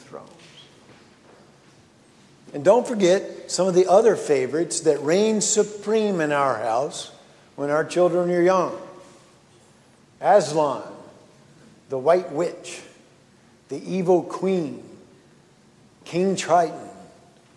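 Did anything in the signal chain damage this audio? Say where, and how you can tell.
No, nothing in the signal chain left any audible damage on this audio. Every stage from capture through to playback passes the sound along without a mark that points to a problem at any point.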